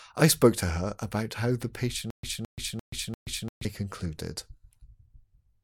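From 2.10 to 3.65 s, after "her about how the", comes a stutter with silent gaps: a 215 ms fragment plays four times, each followed by 130 ms of digital silence, a 345 ms cycle. A stalled player likely replayed its last buffer, and the audio due then is lost.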